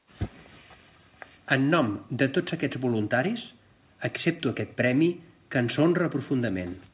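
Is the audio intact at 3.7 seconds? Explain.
Yes, the speech at 3.7 seconds is intact, carried through the WebRTC call path as telephone-band audio with nothing above 4 kHz and no fault at that moment.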